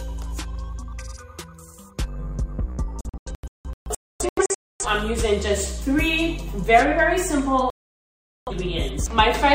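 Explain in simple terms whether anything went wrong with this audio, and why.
Two stretches of digital broadcast dropout break up this audio. From 3.01 to 4.86 s, the sound keeps cutting to silence in short holes, the longest about 0.26 s, losing roughly 1.2 s in total. From 7.70 to 8.52 s it happens again, with about 0.77 s missing. The receiver lost the signal or got corrupted frames and muted until clean ones arrived, so whatever was sent during those gaps is gone.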